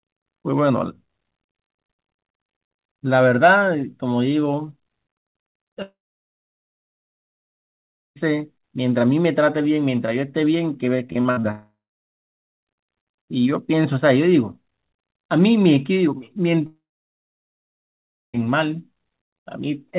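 Long network dropout, 5.82 to 8.18 s: the sound stops mid-flow, a brief buzzy continuation of the last sound fades within about a tenth of a second, and roughly 2.2 s of silence follows before the audio resumes with about 2.3 s simply missing. This is likely a stretch where no packets reached the receiver, so it could only extend what it last had and then fall quiet.

Repeated packet loss (robotic sound), 11.08 to 11.45 s: five short holes, the longest 57 ms, are each patched by stretching the preceding sound, so about 42% of this span is synthetic fill. The result is choppy, with small pieces of the sound chopped out.

Long network dropouts follow at 11.51 to 12.65 s and 16.67 to 18.40 s. In the first, about a quarter second of fading buzz precedes roughly 0.9 s of silence, with about 1.1 s lost. In the second, a short fade leads into about 1.5 s of silence, with about 1.7 s lost. Throughout, the band stops at 4 kHz, as expected from G.711 mu-law on the call path.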